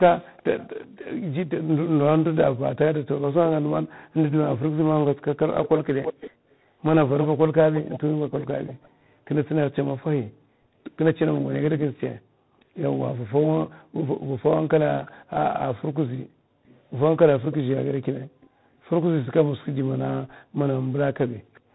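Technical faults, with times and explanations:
Throughout: tandem speech coding, two speech codecs in a row, ending in one that points to G.726; each re-encoding roughens and adds noise, with nothing above 3.9 kHz.
0.37–11.81 s and 15.05–21.6 s: echo leak, a delayed copy of the speech, about 10 dB down at 336 ms, then about 25 dB down at 406 ms; likely incomplete loudspeaker echo cancellation.
8.09–10.42 s, 13.7–16.65 s and 20.4–20.58 s: background gated by the echo canceller, with room sound dipping about 20 dB, then about 40 dB, as the canceller clamps the microphone.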